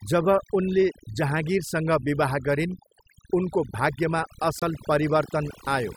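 Across the whole speech clip, overdone noise removal has pushed individual frequency bands down or out wherever they came near the estimated noise floor. Quiet parts of the voice vanish with them, leaving a near-silent background flecked with twinkling specks. Unlike low-bitrate codec smearing, the pauses themselves are hollowed out.

At 4.59 to 4.63 s, a corrupt frame muted fault cuts in: damaged compressed data was rejected by the decoder and replaced with silence. The 36 ms hole starts abruptly, fits roughly two frame lengths, and keeps timing intact, with no concealment smoothing it over.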